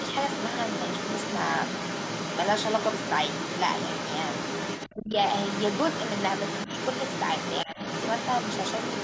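Other side's voice leaking through, from 0.0 to 4.91 s: a second voice sits only a few decibels under the speech, most likely loudspeaker playback that the echo canceller left in the microphone signal.

Speech suppressed in double talk, from 4.91 to 5.16 s: the talker's voice drops sharply, deeply enough to nearly vanish, because the canceller likely could not separate the talker from the echo and turned both down.

The other side's voice leaking through returns from 5.1 s to the end, at a similar level and with the same likely cause.

Speech suppressed in double talk recurs at 7.65 to 7.78 s as a shorter, shallower dip of roughly 10 dB. It sits within a band-limited call signal that has nothing above 8 kHz.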